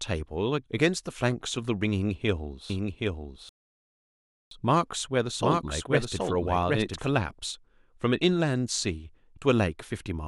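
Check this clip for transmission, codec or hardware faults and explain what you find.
Two faults are audible in this speech clip.

From 2.70 to 7.08 s, a doubled audio track: a second full-band copy trails around 0.7 s behind at about 5 dB lower, with no room colour, starting and stopping abruptly, likely from a slower second capture path.

From 3.49 to 4.51 s, a playback stall: the sound cuts out mid-flow for 1.02 s, then resumes, likely because the player ran short of data or its thread was blocked.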